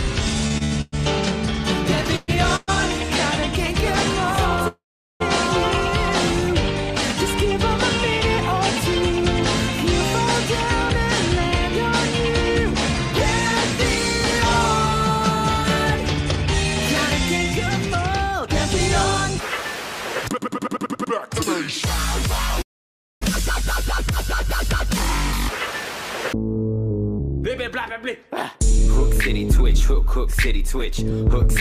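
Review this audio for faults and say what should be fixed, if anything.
Right at the start, from 0.48 to 2.70 s, there's a run of repeated stalls, a proper stutter. The audio halts seven times, with the longest gap at 117 ms, and about 22 percent of that stretch is filler. Each time, the receiver stretched out the last bit of sound while it waited for the next packets to arrive. Nothing gets lost, but the opening drags and hiccups.

Then there are two call audio freezes, one at 4.68 to 5.22 s and another at 22.62 to 23.23 s. In the first, the sound hangs for about 0.53 s, and 0.41 s of that is dead silence. The second lasts about 0.6 s, and about 0.57 s of it is silent. Packets were likely held up somewhere on the network. The playback then picks up where it stopped, so everything after each freeze runs about half a second later.

After the backlog, you can hear two jitter buffer speed-ups, at 18.32 to 21.27 s and again from 24.93 to 31.51 s. 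Both play at 103 percent speed. The receiver trimmed tiny pitch-period slivers over and over to cut the extra delay, roughly a tenth of a second in the first stretch and about a fifth in the second. The pitch holds steady, and the pace is only slightly faster.

To prevent all of this, fix the jitter and delay spikes on the network path (QoS or a steadier link), and give the jitter buffer a bit more headroom so it can ride out late packets.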